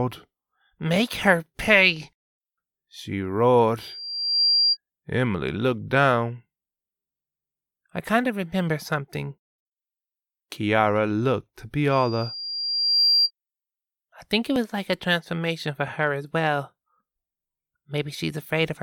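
From 3.80 to 4.77 s, and again from 11.92 to 13.31 s, a loudspeaker feedback squeal rises out of the speech. Each time a single pure tone at 4.8 kHz swells over under a second in the first case and about a second in the second, ending a few decibels louder than the speech itself. The microphone is hearing the loudspeaker it drives, and at 4.8 kHz the gain around that loop exceeds unity, so the tone reinforces itself until the amplifier limits it or the loop is broken.

At 14.56 s there is a tiny skip with a small jump in the speech, caused by an overlap between stream segments. Two adjacent segments carry overlapping time stamps, and the player discards the duplicated span even though that sound was never actually repeated. Roughly 10 ms of audio is lost and the waveform steps abruptly at the joint. The stream was split into 6-second segments.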